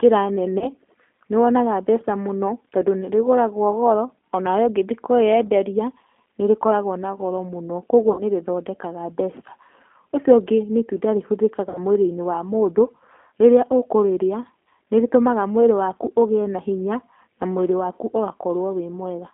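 Throughout the clip the speech carries the signature of the G.729 codec, consistent with the 8 kbit/s G.729A variant. The band is confined to roughly 250 Hz to 3.4 kHz, so there is no low body and no air above. Because the decoder rebuilds each 10 ms frame from a vocal tract filter, a pitch predictor and a handful of pulses, the voice has a plainly audible rough, slightly synthetic texture.

Three dropouts are covered by VoIP packet loss concealment. At 0.59 to 0.70 s about 20 ms of audio went missing, which fits a single lost packet. At 8.12 to 8.22 s and again at 11.69 to 11.79 s the gaps are about 60 ms each, pointing to three packets. In each case the decoder extends the last pitch and filter at falling gain, producing a brief buzzy tone or coloured noise that fades, and the voice stays weak and distorted for a moment after the stream resumes.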